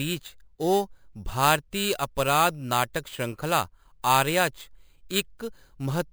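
Throughout the speech, imaging from sample-and-hold upsampling adds a bright metallic fizz. Audio at 11 kHz was raised to 44.1 kHz by repeating samples unfiltered. A spectrogram shows a mirrored copy between 5.5 and 11 kHz, about 14 dB down, and the waveform looks stair-stepped.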